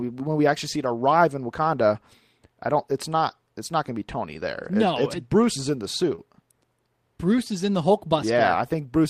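At 1.03 s, just after "we actually see it", a lost packet was rebuilt from error correction. The next packet carried a rough low-bitrate copy of the missing 20 ms, so there is no gap, only a brief grainy, noisier patch. The same happens at 4.41 s.

From 6.15 to 6.20 s, after "is in the", comes a short concealed packet loss. About 20 ms never arrived. The decoder extended the preceding sound to cover it, heard as a quick smear. From 6.18 s that stretch also carries a rebuilt copy. A final rebuilt packet sounds at 7.32 s.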